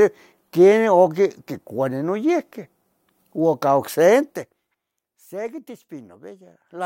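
Speech clip with zipper noise from 4.21 to 4.78 s: a level drop of roughly 15 dB applied in unsmoothed 1 dB steps, about thirty per second, each producing an audible tick.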